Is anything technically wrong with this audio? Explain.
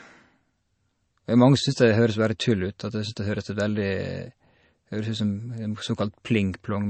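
Yes. Throughout, the speech was likely squeezed by MP3 compression at a low bitrate, near 33 kbps: bits ran short, so the encoder dropped everything above 8.3 kHz and zeroed weak frequency lines frame by frame, leaving dull, watery, swirling audio with smeared consonants.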